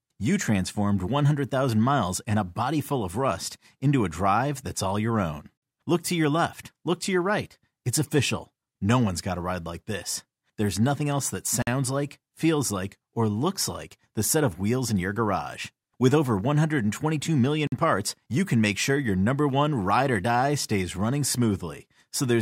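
The speech is cut by three short holes of silence with hard edges, each about 50 ms long: at 5.57 s just after "that's all your own", at 11.62 s between "nothing else that" and "like feels like or", and at 17.67 s just before "parts you can make". This is a gap between chunks. The holes recur every 6 s, which points to audio handled in 6 s chunks with silence inserted at each join, without losing any of the sound itself.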